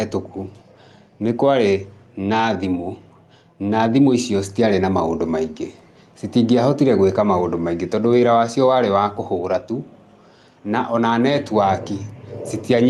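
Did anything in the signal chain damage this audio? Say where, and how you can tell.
Yes. Gain pumping runs through the whole speech clip. The level swings by around 5 dB, pulled down under every loud syllable, so loud and quiet passages sit unnaturally close together. The likely cause is input gain set far too high, with a fast limiter or compressor in the capture or call processing clamping each peak. On a waveform, peaks look flattened and evenly sized. On a spectrogram, the noise floor brightens between phrases and dims under speech, separate from the call codec's normal top edge near 12 kHz.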